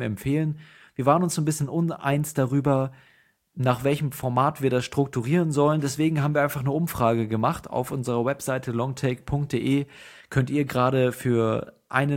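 Nothing in the speech stood out as a technical fault on listening.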